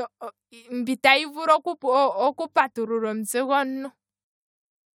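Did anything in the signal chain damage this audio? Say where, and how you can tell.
No, nothing in the signal chain damaged this audio.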